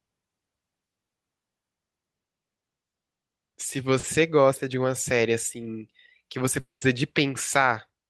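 A short concealed packet loss at 3.99 to 4.05 s in this speech recording leaves a brief smear where about 40 ms of audio arrived too late to decode. The receiver bridged the gap by extending the preceding sound, then crossfaded back into the real signal. At 6.59 to 6.83 s the sound stretches into a fading buzz or hiss, then about 140 ms of silence, before resuming with roughly 220 ms gone. This is likely a long network dropout, with concealment running out before the stream returned.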